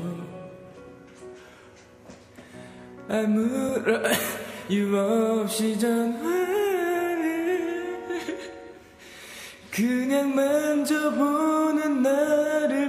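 From 11.13 s to the end at 12.88 s, the sound turns slightly dull, its very top end softened. This is channel delay (comb filtering): one channel trails the other by about a single sample, so summing to mono cancels a notch near 20 kHz.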